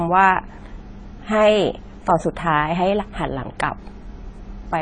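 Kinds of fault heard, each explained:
AAC compression: dull, smeared speech with a warbling, fizzy edge on sibilants and nothing above 10.1 kHz, likely from low-bitrate AAC-LC coding around 24 kbps.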